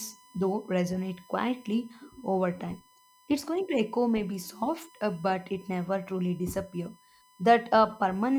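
Power or ground current drawn by the USB bus in regular 1 ms frames is leaking into the audio path for the whole of this speech clip, producing USB whine. The result is a steady, fixed-pitch tone at 1 kHz, sitting roughly 30 dB below the speech. It does not follow the talker's pitch or loudness, so it hangs under every pause as a thin, constant whine, most noticeable in the gaps between phrases.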